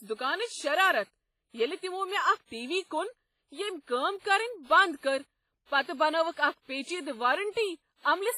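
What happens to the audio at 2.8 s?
At 2.8 s the speech is passing through what is likely WMA compression, present across the whole clip, at a heavy level consistent with about 24 kbps. Long transform blocks smear quantisation noise, giving ringing, washy speech with breathing hiss and nothing above 15.5 kHz.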